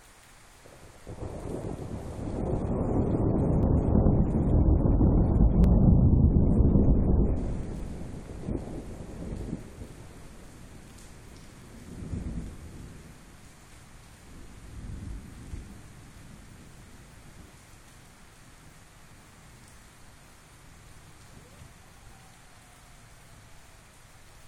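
A small click or skip is heard at 1.64, 3.63, 5.64, 7.63, 9.63, 11.62, 13.61 and 15.60 s, spaced about 2 s apart. This is overlap between stream segments. Neighbouring 2-second chunks claim overlapping time stamps, so the player discards roughly 15 to 20 ms that was never actually duplicated. The sound jumps forward with no silence. A dropout leaves a gap, but here the waveform splices abruptly, and the steady 2-second rhythm points to segment boundaries.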